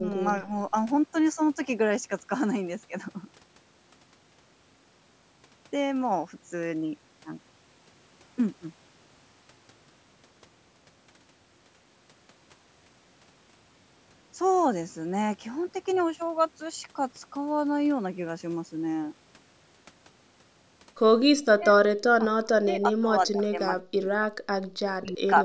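Speech suppressed in double talk appears at 0.00 to 0.17 s and again at 0.41 to 0.52 s. The speech sinks by roughly 15 dB in the first spot and only slightly in the second, briefly dipping the opening. The likely cause is an echo canceller that heard both ends talking at once, could not tell the local talker from loudspeaker echo, and turned everything down.

The same suppression returns far more heavily at 21.54 to 21.81 s, with a drop of roughly 35 dB, and from 22.11 s to the end of the clip. In that last stretch the level falls by up to roughly 40 dB, and about two seconds of speech come through broken, ducked or nearly silent in pieces.

An echo leak sits inside that final stretch at 23.43 to 23.47 s. A faint scrap of delayed speech, about 30 dB below the main speech and trailing it by 217 ms, slips through for 40 ms. This is likely a loudspeaker whose echo canceller failed to remove everything its microphone picked up, so a fragment of the sound was returned. 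The call audio is band-limited, with nothing above 8 kHz.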